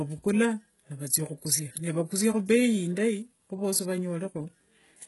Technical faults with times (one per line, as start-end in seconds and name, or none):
0.00-5.07 HE-AAC compression